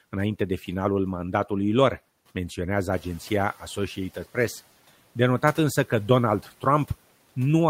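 At 2.91 s the room noise behind the speech jumps by about 12 dB, and the noise suppressor is caught out. For the next 0.72 s, until 3.63 s, the louder noise comes through with less reduction, then sinks by about 7 dB as the suppressor's noise estimate catches up. Unlike gate pumping, this is a single smooth settling after one step in the noise floor, not repeated swelling tied to pauses in the speech.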